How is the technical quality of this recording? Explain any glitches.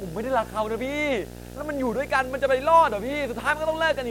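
The recording is compromised by video or display buzz running for its whole length. A screen or video cable is coupling interference into the audio path, so the picture's 60 Hz field rate appears as a steady buzz under the speech, with a layer of hash above it. The buzz sits roughly 15 dB below the speech.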